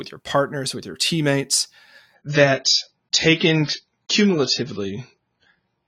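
At 2.15 s the speech switches abruptly to a duller, grainier sound that lasts to the end at 5.88 s: an adaptive stream at a lower bitrate. Nothing remains above 7.1 kHz, and swirly codec artefacts rise, which fits the player moving from about 96 to 16 kbit/s AAC when the connection slowed. Unlike a rebuffering stall, there is no gap or pause. Unlike a plain low-pass filter, the band loss comes with added coding artefacts.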